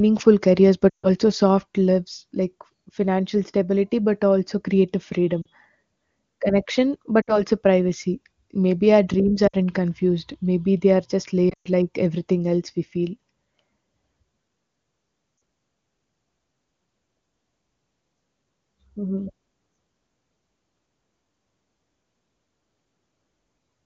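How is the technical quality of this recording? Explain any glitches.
The wideband phone coding sounds clean, but there are brief dropouts from lost AMR speech frames at 0.90–1.08, 5.42–5.47, 7.22–7.43, 9.47–9.55, 11.49–11.68 and 15.37–15.41 s. When frames fail their error checks, the decoder repeats the last good voice parameters at falling level. The result is a short smeared or fading gap, followed by a rough recovery.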